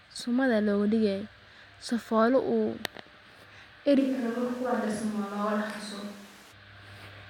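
From 4.01 s to 6.51 s the speech abruptly turns roomy and hollow, thinner in the low end and roughly 5 dB quieter, with room noise rising to around 20 dB under it. That's likely a switch to a distant microphone, snapping back just as suddenly.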